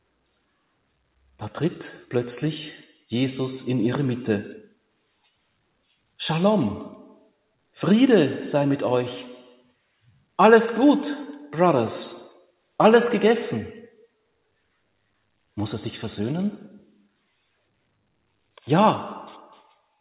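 No technical faults are evident: the sound runs through a call path whose content stops at 4 kHz, consistent with narrowband telephone coding of the G.711 A-law kind, after microphone processing that removes only the lowest bass.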